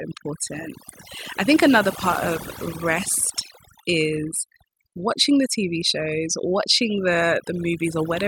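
A speech recording with overdone noise removal from start to end. The noise reduction was set too strong. It drives frequency bands near its noise estimate far down, taking quiet parts of the voice too. The background drops and breaks up into twinkling specks.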